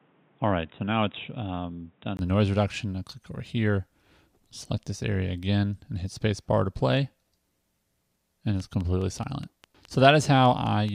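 The audio opens dull and boxy, with nothing above 3.8 kHz, a slightly lower level (around 5 dB down) and a faint new noise floor sitting roughly 35 dB under the signal. At 2.19 s there's a brief dropout of about 20 ms, and then the full band comes back. That points to the input being switched from a poorer device, likely a headset's call profile or another mic, for the first couple of seconds. Near the end, from 8.60 to 10.90 s, there's a train of clicks: about ten evenly spaced pops at 4.82 per second, peaking roughly as loud as the signal itself. That regular ticking most likely comes from electrical interference or a faulty connection or power supply.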